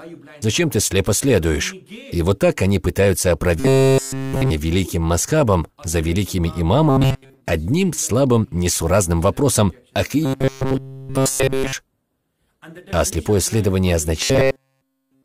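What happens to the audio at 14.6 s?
At 14.6 s the audio is inside a stretch of robotic sound from repeated short buffers, running from 14.21 s to 15.24 s. The likely cause is new audio arriving too seldom, so a segment of about 7.5 ms is replayed over and over in place of the real signal, which forces a rigid, metallic 134 Hz buzz onto the sound throughout that span.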